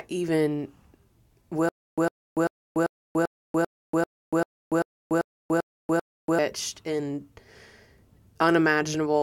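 From 1.69 s to 6.39 s the speech breaks into a stutter with silent gaps: a roughly 104 ms burst repeats twelve times, each followed by about 287 ms of dead silence, every 392 ms. It's likely a stalled stream replaying its last fragment, and the speech from that stretch never arrives.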